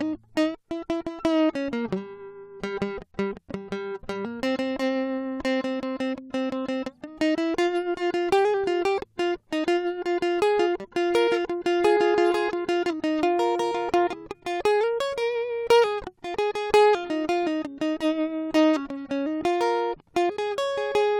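No technical faults can be heard anywhere in this music. Nothing in the sound points to a problem at any point along the way.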